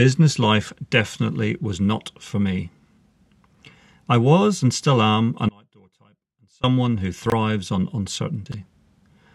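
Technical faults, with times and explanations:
5.49–6.64 s, audio dropout to a faint residue: just after "was and still am" the speech cuts abruptly for about 1.15 s, leaving only faint sound roughly 30 dB down, likely a signal loss with the path still live.
7.26–7.32 s and 8.46–8.54 s, chunks out of order: a 20 ms piece of audio plays about 40 ms and then 60 ms late, causing a brief garbled jumble.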